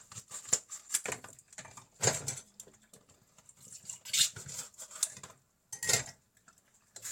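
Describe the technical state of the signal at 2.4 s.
At 2.4 s the signal is intact, with no technical fault present at that moment.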